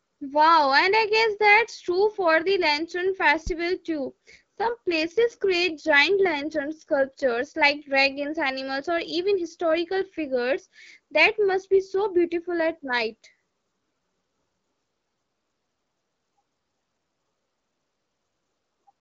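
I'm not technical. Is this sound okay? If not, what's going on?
No. At 3.47 to 3.52 s there is a phantom power thump: a supply switching on or off on the live input sends a deep, brief knock that dies away within about 13 ms. From 4.09 to 7.52 s, an AMR rate drop makes the phone link carry less detail, so the speech, starting just before "like dragons animals or", sounds rougher and more synthetic until it recovers.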